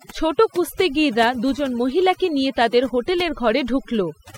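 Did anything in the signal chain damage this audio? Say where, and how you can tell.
Yes: overdone noise removal in call processing, across the whole clip; an over-aggressive suppressor gates bands near its noise estimate, leaving twinkling silence and losing the quiet parts of the speech.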